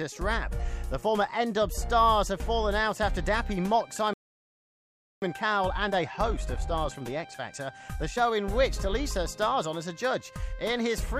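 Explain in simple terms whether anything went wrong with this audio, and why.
Two things go wrong here, one right after the other.

First, a playback stall. At 4.14 s the sound just stops dead mid-flow and stays silent until 5.22 s, a gap of about 1.09 seconds. Nothing is wrong with the recording itself. The player most likely ran dry of incoming data, or got held up, so it had nothing to send out until it caught up again.

Then comes the time-compressed catch-up. From 5.22 s to 8.22 s the player tries to make up the lost ground by snipping out tiny slices and blending the edges together. That plays those three seconds at about 1.1 times normal speed. The pitch stays put, but the audio sounds hurried.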